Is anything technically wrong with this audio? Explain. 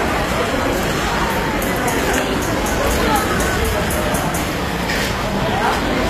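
Yes. Throughout the clip the top end sounds bright but fake, with a gritty, metallic sheen on the high-frequency detail, and nothing at all above about 14.9 kHz. That's likely HE-AAC compression at a low bitrate, maybe around 24 kbps. The codec keeps only the lower spectrum and synthesises the treble by copying lower bands upward under a coarse envelope, so the rebuilt highs don't line up harmonically with what's underneath.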